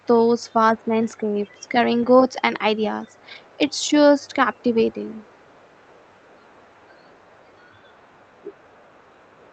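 Speech over a call link, with the audio's top end stopping near 8 kHz, consistent with a wideband call codec such as Opus. A faint second voice, around 35 to 40 dB below the talker, sits at 0.0–0.06, 0.44–1.69, 3.08–3.9 and 4.22–9.52 s. This is other side's voice leaking through, likely from incomplete echo cancellation, and is distinct from room reverb because it carries separate speech. At 0.73–0.94 s, while that second voice is present, the talker dips by roughly 20 dB for about 200 ms. This is speech suppressed in double talk, likely the canceller ducking both voices at once.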